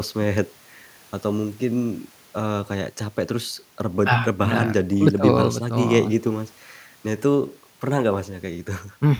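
No dropouts, clicks, distortion or timing faults turn up anywhere in the speech; there is nothing to flag.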